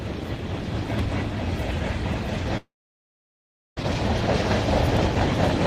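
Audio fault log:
2.57 to 3.78 s, long network dropout: likely a stall in packet delivery starved the receiver for 1.2 s. It briefly carries the last sound on as a fading buzz, then leaves about 1.09 s of silence, and the sound resumes with that stretch missing.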